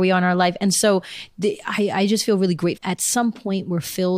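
At 2.77 s, right after "I just feel really", the speech jumps abruptly forward with a brief blip at the join, a stream segment skipped. The likely cause is a segment of the stream that failed to load, so the player moved straight on to the next one. Unlike a dropout, which leaves a short silent gap and then resumes where it stopped, here the speech resumes further along rather than continuing from where it broke off.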